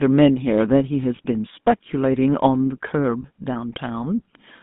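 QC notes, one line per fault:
Throughout: GSM full-rate codec. The speech was squeezed through a coder that models the vocal tract and excites it with a sparse, regular pulse train, which fits a 13 kbps GSM full-rate link. The plainly audible result is a buzzy, gravelly roughness, with the band held to about 150 Hz to 3.6 kHz.
1.16–1.26 s and 3.22–3.25 s: lost GSM frames. Each gap fits a single missing 20 ms frame that the decoder patched by reusing the last good frame's settings. This leaves a brief, rough, metallic ring where fresh sound should be.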